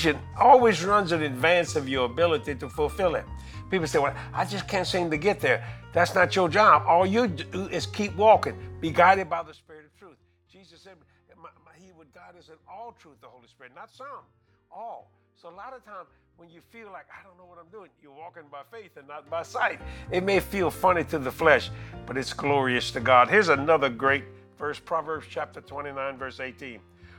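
From 9.10 to 9.65 s there is zipper noise: a drop of roughly 25 dB is applied in unsmoothed 2 dB steps, about thirty per second, so each step clicks and the fade ticks audibly.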